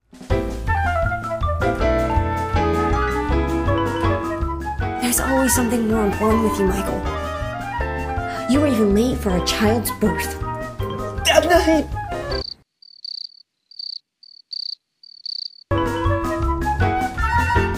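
No technical faults can be heard anywhere in the audio, and the signal holds steady throughout.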